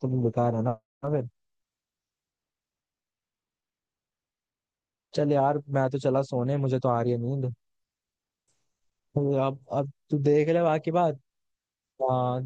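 No technical fault can be heard anywhere in the clip. The speech runs without any interruption, distortion or other disturbance that would point to a problem in how it was captured or passed along.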